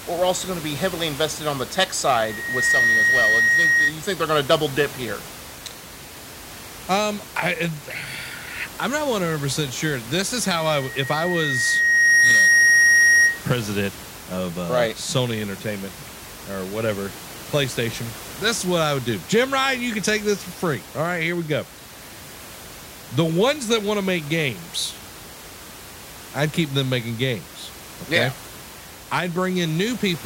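A loudspeaker feedback squeal at 1.9 kHz swells after "invested on the tech", 2.12 to 3.94 s, peaking a few dB over the speech. The microphone re-amplifies its own loudspeaker. It recurs from 10.43 to 13.46 s, building slowly, ending before "president of uh right".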